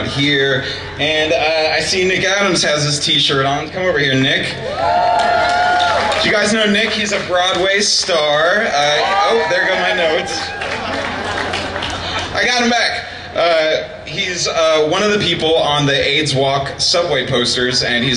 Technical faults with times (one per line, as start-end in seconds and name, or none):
none